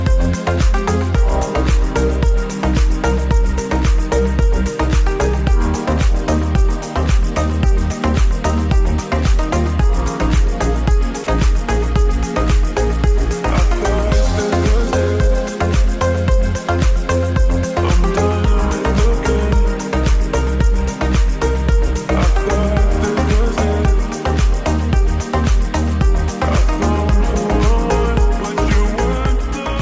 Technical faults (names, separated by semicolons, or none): sound dropped by the voice detector